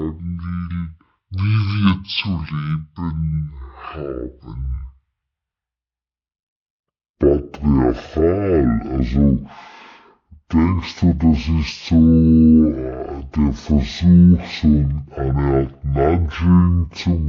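From start to end the clip suffers stereo read as mono: left and right samples, interleaved, were taken as one channel, so everything plays at 0.5x speed, an octave (12 semitones) low. A spectrogram shows compressed content plus a fainter mirrored copy in the upper half.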